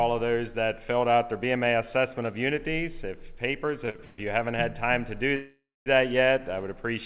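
From 3.86 to 4.20 s the audio stalls repeatedly, a stutter: four short breaks where the last sound is held and extended, covering about 219 ms in total, with the longest break 133 ms. Packets kept arriving late, so the jitter buffer emptied again and again and the receiver padded each hole. Nothing is lost, but about two thirds of that stretch is filler, which drags it out. Unlike a single freeze, this is a cluster of brief catches.

At 5.36 s a single longer hold begins and lasts until 5.88 s. The last sound carries on for half a second, fading out, and about 230 ms of that is silence before the audio resumes where it left off. This call audio freeze likely comes from packets being held up in transit long enough to drain the buffer, adding a 500 ms delay rather than removing any audio. It is one continuous pause rather than a run of stutters, heard within the narrow telephone band, with nothing above 4 kHz.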